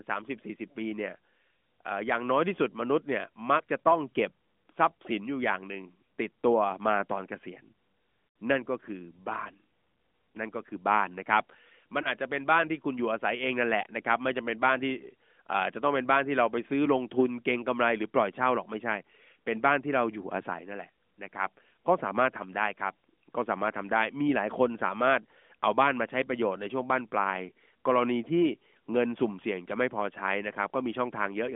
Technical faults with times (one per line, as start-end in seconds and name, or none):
3.58-3.62 lost AMR speech frames
8.28-8.36 lost AMR speech frames
12.02-12.12 lost AMR speech frames